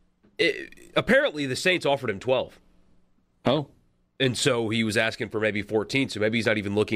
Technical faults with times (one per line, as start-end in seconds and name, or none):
none